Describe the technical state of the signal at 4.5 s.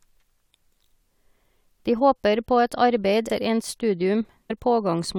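Right at 4.49 s you get compressed frames skipped: a chunk of coded speech never reaches the output, so the audio leaps forward by something like a third of a second. That jump fits roughly ten frames of about 23.2 ms each going missing or being rejected by the decoder as damaged. The speech simply picks up further along.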